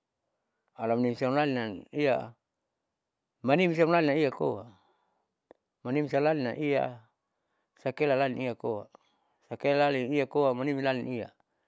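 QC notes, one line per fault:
No faults found in this clip.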